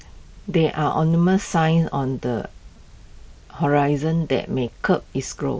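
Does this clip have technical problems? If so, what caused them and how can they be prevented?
Yes. The speech has concealed Bluetooth headset packet loss at 1.48 to 1.51 s, 2.76 s and 4.67 s, lasting about 22, 15 and 8 ms, which fits three, two and one lost 7.5 ms frames. At each gap the receiver fills in by repeating the closest-matching recent stretch of waveform, so the short single gap is nearly hidden and the longer ones leave a brief buzzy patch with a small warble where real speech resumes. The wideband mSBC headset codec carrying the speech is audible as a light graininess. To prevent the dropouts, keep the headset close to the phone with a clear line of sight and reduce 2.4 GHz interference from Wi-Fi and other Bluetooth devices.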